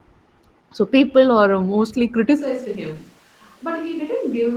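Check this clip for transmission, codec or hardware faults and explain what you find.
Two faults are present: low-rate Opus voice compression throughout, and a switch to a distant microphone from 2.40 s to the end.

Opus voice compression runs for the whole clip. The speech is coded in hybrid mode, linear prediction below 8 kHz with a transform layer above, and the excitation is coded coarsely, which fits a bitrate around 16 kbps. The voice comes through plainly muffled, hoarse and faintly robotic.

The switch to a distant microphone happens at 2.40 s and lasts to the end. The close pickup likely dropped out, leaving a far microphone. The voice turns suddenly roomy and hollow with thinner bass, falls by about 5 dB, and room noise rises to around 30 dB below the speech.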